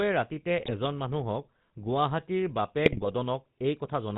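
From the start, the speech carries GSM full-rate codec damage. Nothing passes above 4 kHz. The codec rebuilds the voice from a vocal-tract model fed by sparse, regularly spaced pulses. That gives a clearly buzzy, gravelly edge, which fits the 13 kbit/s GSM rate.

From 0.58 to 0.75 s, and again from 2.86 to 3.07 s, GSM bit errors break the sound. Corrupted filter, pitch and gain values warp the spectrum and jolt the level. The result is squawks, pops and gargling.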